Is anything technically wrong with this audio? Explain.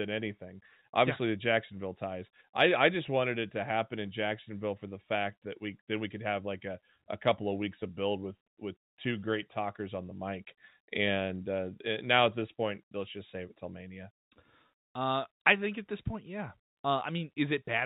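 No, nothing in this speech clip points to a technical problem. It has the narrowband sound of a call path with nothing above 4 kHz, which fits G.711 mu-law telephone coding at 64 kbps.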